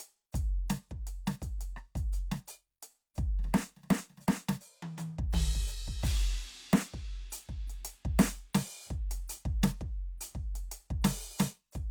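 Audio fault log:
No fault found in this music clip.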